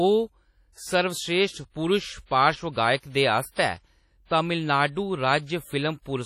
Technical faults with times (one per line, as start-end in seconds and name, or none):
0.00-6.26 WMA compression